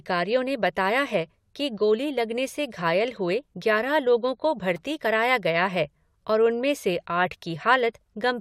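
No technical faults can be heard anywhere in the speech recording. There is no event in it that calls for a time, a value or a cause.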